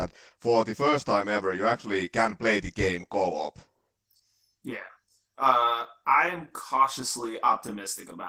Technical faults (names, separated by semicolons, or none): channel delay (comb filtering); Opus voice compression